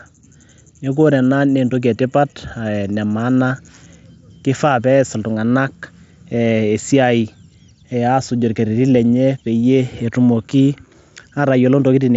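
No technical faults are present.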